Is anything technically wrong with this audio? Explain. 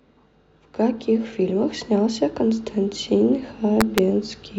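Yes. From 3.81 to 3.98 s in this speech, integer overflow: peaks driven about 1 dB past the integer limit wrap to the opposite sign, producing harsh cracks sharper than clipping.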